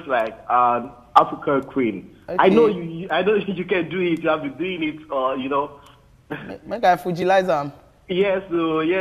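At 7.22 s there is a block of digital silence. The output drops to silence for about 1.8 ms and returns without a fade, heard as a brief tick.

At 8.55 s there are repeated frames. A 23.2 ms stretch plays twice, which points to a single compressed frame being sent again. It makes a tiny stutter and adds 23.2 ms.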